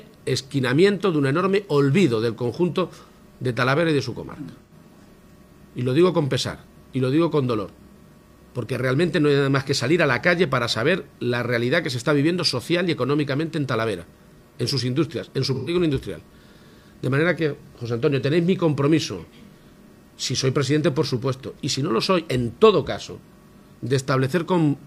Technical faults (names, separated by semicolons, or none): AAC frame loss with concealment